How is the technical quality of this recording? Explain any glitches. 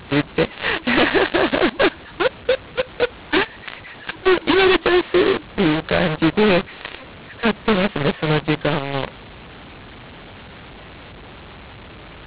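The recording has one serious fault that runs through the whole clip: the telephone audio has been decoded with the wrong G.711 law, which makes the speech harsh and distorted.

Throughout the clip, mu-law and A-law are mixed up. The speech was written as mu-law, but it has been read back as A-law. The two laws map the same 8-bit codes to different levels, so every sample is rescaled unevenly. Some come out louder and some quieter, and near-silent samples are pushed well above zero. The speech sounds gritty and broken, and the pauses fill with a steady hiss.

Two things set this apart from similar faults. Ordinary overload clipping distorts only the loud peaks, while here the grit is present at every level. The normal G.711 quantisation noise at 8,000 samples a second stays faint and follows the speech level, so it would drop away in the pauses. Here the noise stays in the gaps.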